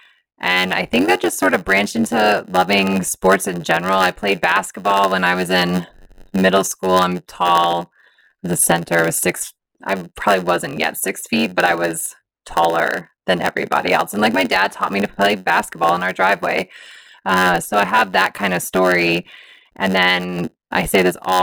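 A block size mismatch (padded) runs through this speech clip from start to finish: one stage hands over blocks shorter than the next stage expects to read, and the shortfall in every block is made up with zeros. Those silent slivers recur at 91.9 Hz, giving a steady buzz under the speech at that rate, and because each block carries only part of its length in real audio, the speech plays at 0.919 times normal speed while keeping about its usual pitch.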